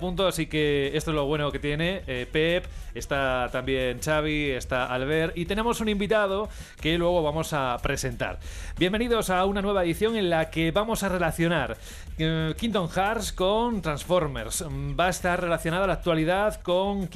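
No technical faults can be heard anywhere in the signal.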